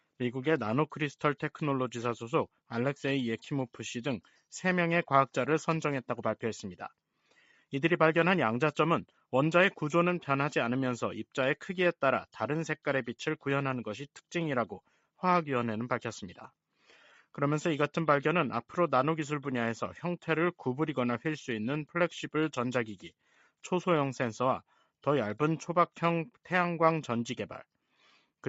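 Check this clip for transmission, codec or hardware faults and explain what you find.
One fault appears three times: sound cut by the noise suppressor, at 7.31–7.63 s, 23.05–23.64 s and 28.0–28.21 s. The suppressor misreads steady or fading sound as noise and pulls it down, by about 9, 10 and 7 dB. The sound sinks or its tail shortens, but never drops to silence, unlike a packet-loss gap. This is heard through the call path's 8 kHz bandwidth.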